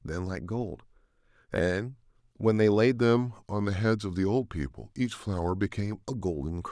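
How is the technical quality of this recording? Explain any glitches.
The recording has one fault, a wrong sample rate, from 2.97 to 6.12 s. Playback runs slower than the recorded rate without conversion, which fits 24 kHz material played at 22 kHz, so speech drops to 0.919 speed and sounds about 1.47 semitones lower, slightly dragged and deepened.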